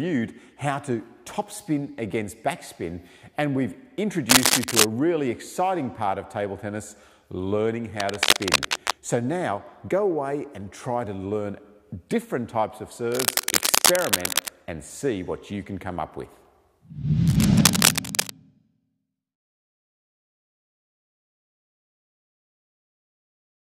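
Bursts of cable scratch noise at 4.29–4.85, 8.00–8.93, 13.12–14.48 and 17.28–18.30 s sit level with or slightly above the sound, likely from a worn cable or connector being moved. Unlike isolated clicks or steady hiss, each is a dense, uneven rustle lasting up to about a second and a half.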